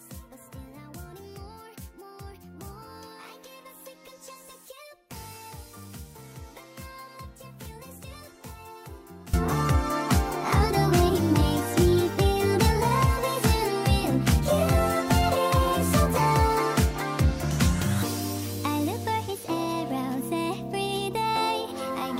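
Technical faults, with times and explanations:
0.0–9.34 s, one channel inverted: the sound drops by about 20 dB and turns faint, then snaps back to full level. The likely cause is reversed polarity on one stereo side, so content common to both channels cancels when summed. The waveform shows a shrunken envelope, and the spectrogram shows faded energy until the jump at 9.34 s.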